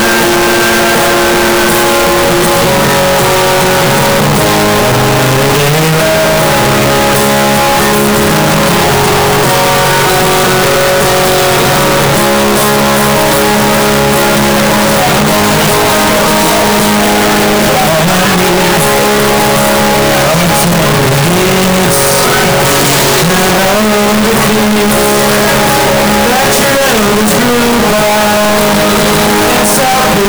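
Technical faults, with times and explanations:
Throughout: float read as integer. The waveform is a near-square block at an almost fixed, high level, very loud and harsh, with background noise as loud as the main sound, yet pitch stays traceable. Likely cause: 32-bit float samples read as 32-bit integers, so sign and exponent bits dominate each value.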